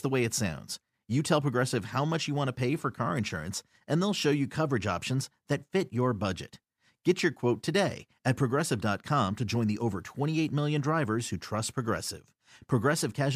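No technical faults can be heard in this recording.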